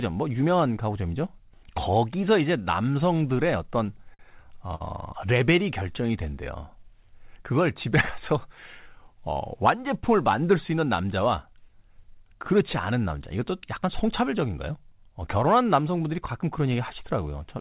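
Between 3.86 and 4.82 s, packets kept arriving late, and the receiver's jitter buffer ran dry six times. These are repeated stalls (stutter). At each gap the receiver stretched out the last bit of speech, for about 141 ms in total and at most 50 ms at a time, roughly 15% of that stretch. Nothing is lost, but the speech catches and hesitates in short jerks instead of flowing.

From 5.83 to 6.13 s the buffer was building back its reserve, which causes a jitter buffer slow-down. The receiver repeated single pitch periods or bits of pauses to add about 38 ms, so this passage plays at about 89% speed. The pitch holds steady, but the sounds are drawn out. Throughout, nothing reaches above 4 kHz, which fits a narrowband G.711 call path.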